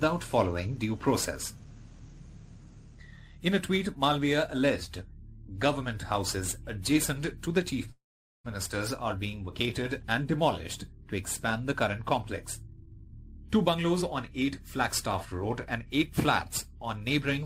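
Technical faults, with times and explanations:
7.91 to 8.46 s, call audio freeze: the sound stalls for about half a second, a brief fading fill and then roughly 0.43 s of silence, before picking up right where it stopped. Nothing gets lost, it's just pushed later, likely because packets were held up and the jitter buffer ran dry.
12.62 to 15.78 s, jitter buffer speed-up: playback runs at about 117% speed with the pitch unchanged, so it sounds rushed. The receiver is trimming tiny pitch-period slices over and over, about half a second in total, to burn off the delay built up earlier.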